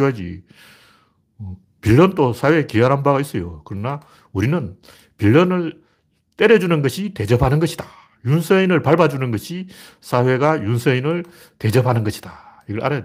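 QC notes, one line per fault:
No faults were found in this speech recording. There is nothing to log against it.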